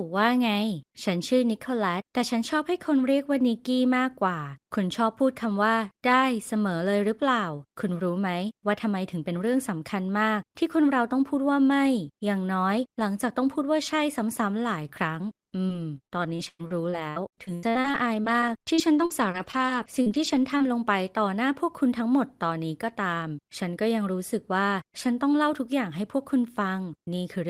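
From 15.67 to 20.62 s, the speech suffers repeated packet loss, giving a robotic sound. About two dozen holes follow one another. Each is patched by stretching the last sound, the longest lasting 105 ms. The voice turns choppy, with pieces missing.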